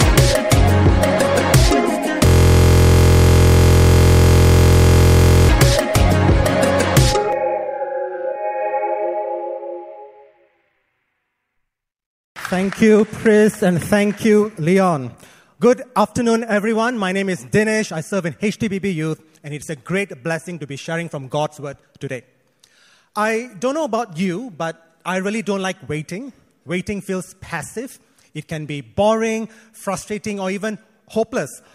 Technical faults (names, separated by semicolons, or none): system hang loop